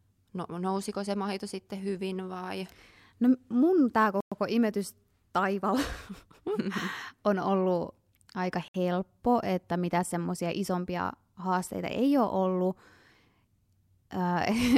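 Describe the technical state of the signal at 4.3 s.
At 4.3 s you're inside a dropout: right after "mun tämä" the speech cuts to dead silence from 4.21 to 4.32 s, about 111 ms, then comes back on "imetys taivaalla". That's likely a Bluetooth stall, where held-up packets let the headphones' buffer run dry.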